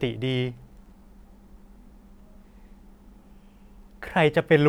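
No technical faults can be heard at any point in the speech.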